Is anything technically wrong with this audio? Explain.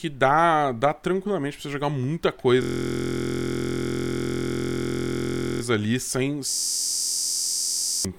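Yes, two system hang loops. From 2.62 to 5.62 s, after "pra você jogar muita" and before "ali sem", and again from 6.51 to 8.05 s after "ali sem", the driver froze while the hardware replayed one 23.22 ms buffer, which fits 1024 samples. That produces a steady 43.1 Hz buzz. On a waveform it looks like identical blocks tiling the span, and on a spectrogram like a rigid comb of harmonics spaced 43.1 Hz apart.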